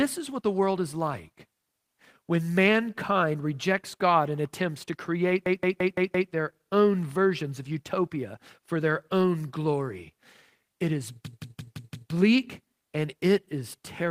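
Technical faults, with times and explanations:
5.46–6.32 s and 11.26–12.12 s, system hang loop: twice the computer or audio driver stalled while the sound hardware kept replaying the same ring buffer. Right after "and attempts to create", and again near 11.3 s, a 0.17 s slice of speech repeats exactly five times at about 5.9 Hz, giving a machine-gun stutter. That length fits an 8192-sample buffer. The speech resumes with "their own versions of" after the first, and barely any audio is lost.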